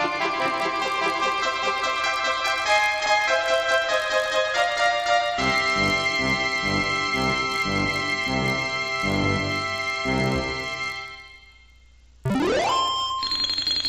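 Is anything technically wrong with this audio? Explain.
Yes. Throughout, a resampler restarted on every block converts 16 kHz to 48 kHz in 20 ms chunks, each missing its neighbours at the edges. The resulting errors make a 50 Hz buzz under the signal, with faint vertical lines every 20 ms on a spectrogram and tiny waveform steps at block boundaries.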